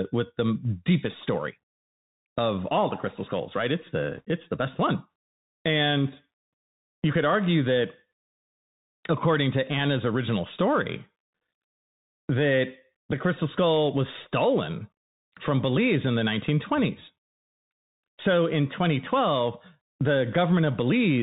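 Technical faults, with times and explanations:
Throughout: Bluetooth CVSD headset codec, plainly audible; band-limited to 4 kHz, sibilants scratchy, loud highs distorting as the adaptive step lags, granular hiss beneath.
4.17 to 4.22 s: bit errors on a Bluetooth voice link, after "crystal skulls right it's"; roughly 1% flipped bits give brief rushing crackle, no loud clicks since errors decay.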